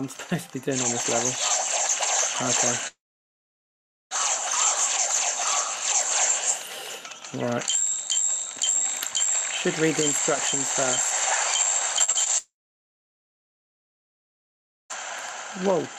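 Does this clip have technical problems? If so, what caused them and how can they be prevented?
Yes. The most likely cause is a long network dropout, which happens twice. From 2.87 to 4.13 s about 1.24 s of audio never arrives. The receiver stretches the last sound into a brief fading buzz, then leaves about 1.14 s of near-silence before the sound resumes with that stretch gone. From 12.38 to 14.92 s the same happens for about 2.52 s, with roughly 2.38 s of silence. A more stable connection, such as wired rather than congested Wi-Fi, prevents these gaps.

Just before that second dropout, from 11.99 to 12.28 s, there is repeated packet loss, which gives a robotic sound. Four separate gaps, the longest 41 ms, are patched by extending the preceding sound, so about a third of that short span is synthetic fill. The result is choppy sound with small pieces missing, and it leads straight into the longer outage. 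A larger jitter buffer and forward error correction in the codec would hide or recover these brief losses.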